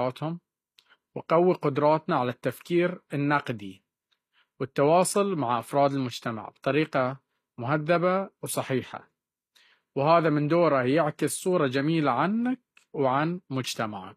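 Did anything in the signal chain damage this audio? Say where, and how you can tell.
Yes: gritty, lispy s sounds and nothing above 14.9 kHz throughout point to the codec, likely HE-AAC compression near 24 kbps, rebuilding treble from lower bands.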